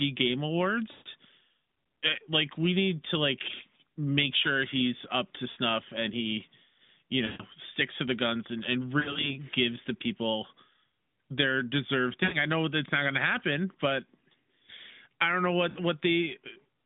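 At 0.92, 5.50, 7.26, 9.0, 12.24 and 15.70 s the speech smears and sags in lost AMR speech frames. Radio errors corrupted frames, and the decoder stretched the last good pitch and vocal tract settings at falling gain. The 140 ms gaps at 0.92 and 7.26 s drag out and fade toward silence. The others, 60 to 80 ms, just dip or warble. Near 9.0 s short losses scatter over 160 ms. Unlike a hard dropout, nothing clicks or cuts to silence. Speech stays band-limited, light narrowband coding that fits AMR-NB at about 12.2 kbps.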